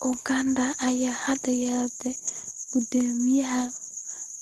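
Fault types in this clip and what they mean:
Nothing to flag here: the speech just comes through a normal call link, with the top end rolling off the way a typical call codec tends to leave it.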